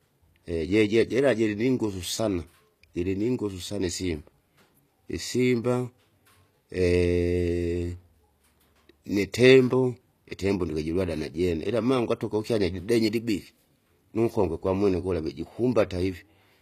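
All the way through, the treble sounds rebuilt rather than real, with gritty, lispy s sounds and nothing above 14.9 kHz, likely HE-AAC compression at a bitrate that fits about 24 kbps.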